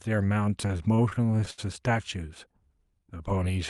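From 0.67 to 1.60 s the speech breaks into repeated stalls (stutter). Packets arrived late, so the jitter buffer ran dry ten times, with the longest gap about 72 ms. Each time the receiver stretched the last sound to cover the wait, about 205 ms in all. Nothing is skipped, unlike a dropout, so the speech hitches and drags instead of losing pieces.

From 2.74 to 3.18 s a jitter buffer slow-down follows. To rebuild its reserve, the receiver repeated single pitch periods, adding 38 ms and playing at 92% speed. The pitch stays put, which separates it from a tape-style slowdown, and the sounds draw out evenly without the stop-start hitching of the earlier stalls.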